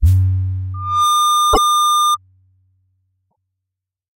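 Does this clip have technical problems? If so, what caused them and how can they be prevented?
Yes. Loudspeaker feedback squeal runs from 0.74 to 2.17 s: a 1.2 kHz tone builds within about a third of a second to roughly 5 dB above the sound. Lowering monitor gain, repositioning the microphone, or notching 1.2 kHz prevents it.

Repeated frames cause stutters at 1.53 s, where a 96 ms block replays once, and at 3.30 s, where a 24 ms block replays twice, together adding 144 ms. Verifying frame sequence numbers in the writer or transport prevents duplication.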